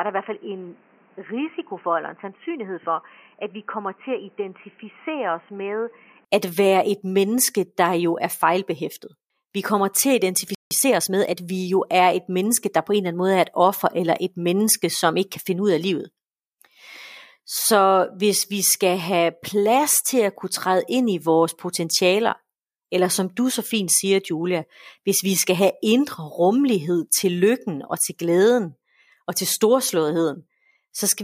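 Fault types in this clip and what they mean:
input switched to a poorer device: From 0.0 to 6.25 s the speech is dull, roughly 10 dB quieter, over a noise floor about 30 dB down, likely a lower-grade microphone.
playback stall: At 10.55 s the speech stops dead for 163 ms, most likely because the player ran out of data, then resumes.
time-compressed catch-up: From 10.71 to 11.35 s the speech runs 1.25 times fast at unchanged pitch, small pieces cut and cross-faded to clear the backlog.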